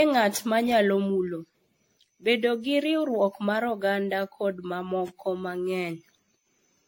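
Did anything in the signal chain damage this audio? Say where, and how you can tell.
Yes. At the codec stage the whole clip sounds swirly, smeared and hollow, with softened consonant attacks and nothing above 16.5 kHz. That pattern is likely generation loss: the speech was decoded and re-encoded about seven times, which fits a chain of AAC-LC at around 64 kbit/s. Each pass quantises on a shifted frame grid, so the noise and spectral holes stack up. A single encode at that rate would keep its band limit but would not sound this washed and phasey.

At the buffer or streaming stage, from 5.08 to 5.10 s, just after "riwruok mar oganda kod", a 20 ms fragment plays twice, heard as a brief stutter. This is overlapping chunks: a new block began before the previous one ended, so audio at the seam was duplicated. The seam position fits 3-second chunks. A dropout would leave a gap, but here material repeats with no silence.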